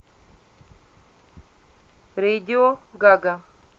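At 2.68 s a call bitrate drop sets in and lasts to the end of the clip, about 1.1 s. The Opus encoder on the call path, which until then carries the speech with an 8 kHz audio bandwidth, is told by a falling bandwidth estimate to spend far fewer bits. It then quantises the spectrum more coarsely, so the speech turns rough and watery. The change in quality fits a drop from about 64 kbps to around 21 kbps, with no recovery before the clip ends.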